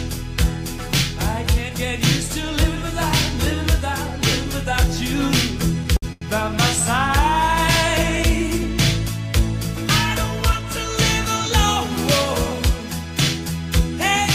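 At 5.97 s the sound hangs for about 58 ms. This is a short stall from a late packet: the packet was late, the jitter buffer ran dry, and the receiver stretched the last sound until it came. A second stall follows at 6.12 s, holding for about 90 ms. Nothing is cut out, so unlike a dropout there is no gap or skipped sound, only a held, slightly buzzy stretch, and the audio then runs on that much later.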